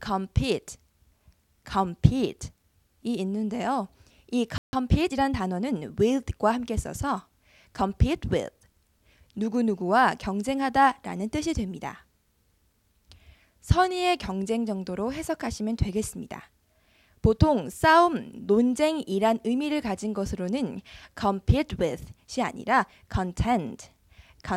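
A playback stall at 4.58 s cuts the sound off mid-flow, leaving about 150 ms of silence until 4.73 s. The player likely ran out of buffered data or had its output thread blocked, so nothing reached the output until it recovered.

Time-compressed catch-up follows from 4.73 to 5.73 s. To clear the backlog built up during the gap, the player trims and cross-fades short slices, running about 1.15 times faster for one second. The audio sounds hurried at unchanged pitch.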